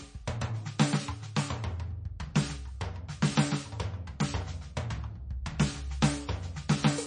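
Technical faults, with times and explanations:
Throughout, MP3 compression: the music has nothing above 9.8 kHz and plainly audible swirly, watery artefacts, likely from a very low bitrate, unlike a plain low-pass filter.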